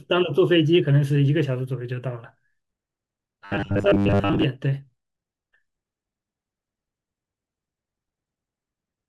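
From 3.45 to 4.44 s the speech takes on a robotic sound from repeated short buffers: a rigid, metallic buzz at 100 Hz that loosely tracks the speech. The likely cause is audio arriving too late, so a 10 ms chunk is replayed in place of most of the real signal.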